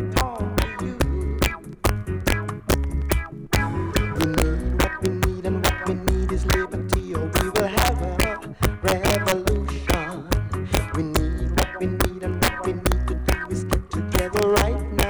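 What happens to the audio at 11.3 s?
At 11.3 s the clip shows the integer overflow present throughout: the signal is driven about 4 dB past the integer limit, so peaks wrap to the opposite sign instead of being limited. Under one percent of samples cross, each producing a harsh crack far sharper than clipping.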